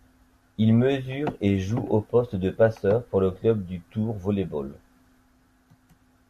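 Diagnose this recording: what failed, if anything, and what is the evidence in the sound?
Nothing in the chain failed: listening through the recording turns up no dropout, click, distortion, level jump or other artefact that would point to a fault at any stage.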